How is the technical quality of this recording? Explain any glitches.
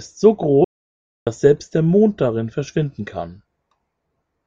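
The recording has one clear glitch: an audio dropout to silence. At 0.64 s the speech cuts off abruptly. Nothing is heard until 1.27 s, when the speech resumes mid-flow. The gap lasts about 0.62 s and is dead silence, with no room tone or background hiss. The input was likely lost for a moment, through a disconnect, failed link or mute, while the recorder kept writing silence. The speech from that stretch is missing.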